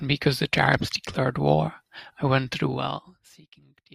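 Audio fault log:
2.55–3.42 s, zipper noise: the speech drops by about 25 dB in coarse 1 dB steps, roughly thirty a second, each stepping click making a ticking absent from a smooth fade.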